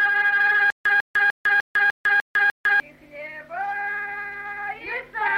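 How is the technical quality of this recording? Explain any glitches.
The recording has one clear playback fault. From 0.70 to 2.80 s there is a stutter with silent gaps: a 148 ms burst of sound repeats seven times, each followed by about 152 ms of digital silence, a steady 300 ms cycle. This is likely a stalled player or stream replaying its last buffered fragment at each retry and then running empty, so the audio meant for that stretch is lost.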